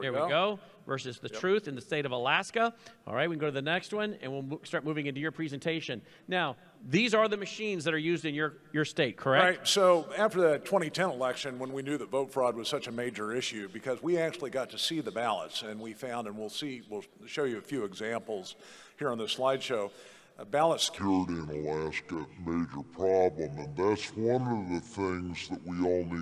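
From 20.98 s to 26.21 s, a wrong sample rate takes hold. The sound plays at two-thirds speed with no conversion. Pitch drops about 7 semitones along with it. Everything turns low and sluggish. The ratio fits 48 kHz audio played at 32 kHz.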